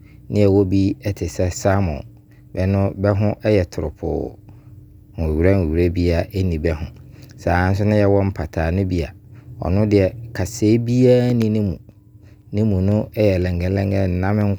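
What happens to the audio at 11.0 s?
At 11.0 s you're inside a run of periodic USB or driver dropouts lasting from 10.92 s to 14.41 s. Every 0.5 s something stalls the bus or driver, and a sliver of speech, a fraction of a millisecond, drops to silence. That gives about seven evenly spaced ticks riding on the speech.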